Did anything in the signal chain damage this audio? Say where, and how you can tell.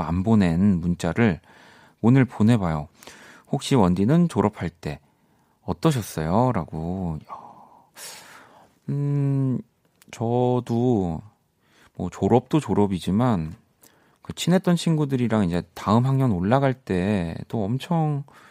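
No, there is no audible damage from any stage of the chain anywhere in this speech recording.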